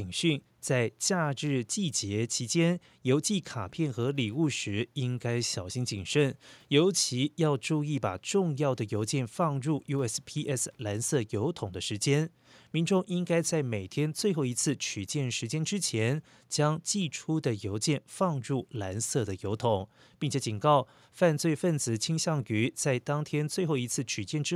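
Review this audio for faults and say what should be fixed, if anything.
Nothing needs fixing: the speech signal is intact throughout, with only the room's own background noise sitting about 44 dB below it.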